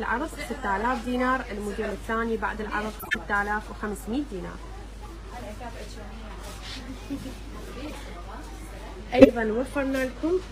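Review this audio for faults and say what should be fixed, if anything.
Corrupt frames were decoded at 0.79, 2.99, 5.04, 6.48, 7.85 and 9.19 s. Flipped bits misplace spectral energy, giving short chirps and noise bursts. The longest is 0.17 s at 2.99 s, and the 9.19 s burst is the loudest. Prevention: validate frames and conceal failures before decoding.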